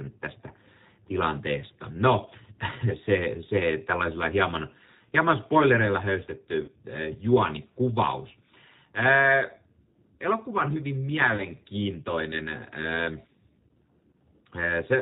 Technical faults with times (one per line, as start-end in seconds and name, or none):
0.00-15.01 G.729 codec
6.64-6.72 VoIP packet loss concealed by the speech codec
11.36-11.42 VoIP packet loss concealed by the speech codec